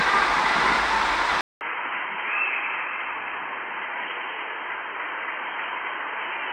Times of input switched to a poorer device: 1.41-6.53

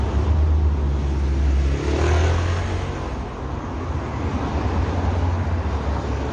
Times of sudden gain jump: none

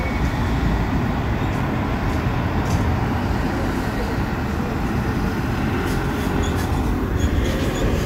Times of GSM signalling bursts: none

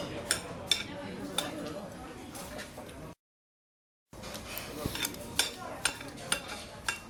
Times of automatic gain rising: none

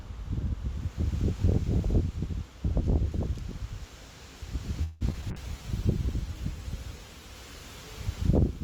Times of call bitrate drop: 5.32-8.63

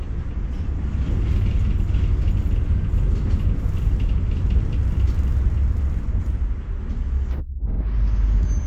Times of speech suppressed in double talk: none

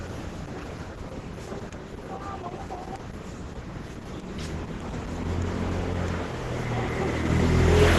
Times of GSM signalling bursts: none

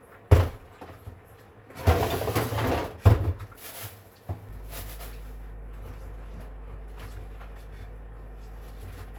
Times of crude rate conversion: none

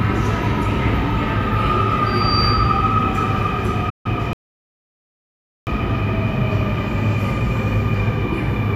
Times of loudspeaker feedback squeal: 2.06-2.93

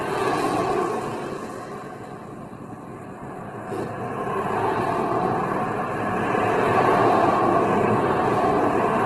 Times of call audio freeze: none

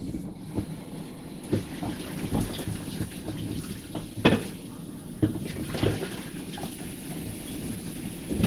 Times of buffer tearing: none

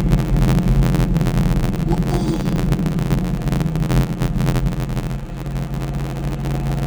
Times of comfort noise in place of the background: none

